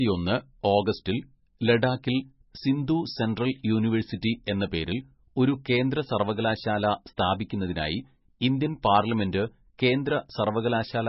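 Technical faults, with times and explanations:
Throughout, MP3 compression: the encoder was likely starved of bits, which fits a very low bitrate of around 18 to 19 kbps. With so little to spend, it removed all treble above 5.6 kHz and dropped the weaker frequency lines, letting them flicker in and out from frame to frame. The speech therefore sounds dull and muffled, with a heavy watery, swirling texture, metallic chirps on s sounds, and smeared consonant onsets.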